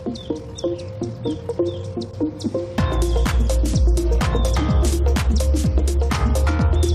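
No technical faults can be heard anywhere in it.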